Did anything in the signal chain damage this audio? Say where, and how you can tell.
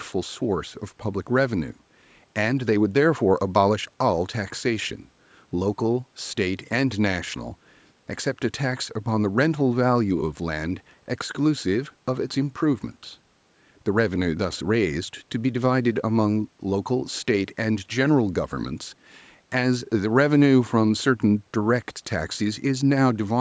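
No, nothing in the chain has hurt this speech; it has gone through a call's microphone processing, which trims the lowest bass and leaves nothing above 8 kHz, and that is just how such a path normally behaves.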